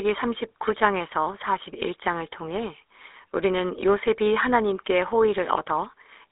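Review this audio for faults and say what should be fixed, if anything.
GSM full-rate codec damage runs throughout and is plainly audible. The speech sounds buzzy and gravelly. The codec rebuilds it from a vocal-tract model driven by sparse pulses, which fits a 13 kbps stream. The band spans only 300 Hz to 3.7 kHz. To prevent it, record or route the call over a wideband path rather than a legacy GSM link.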